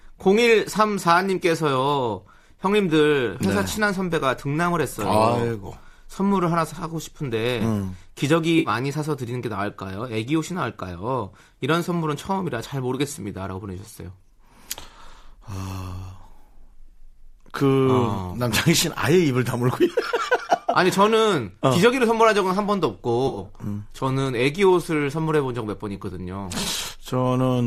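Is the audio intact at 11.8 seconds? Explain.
Yes, the speech at 11.8 seconds is intact, with no dropout, click, distortion or other fault at that moment.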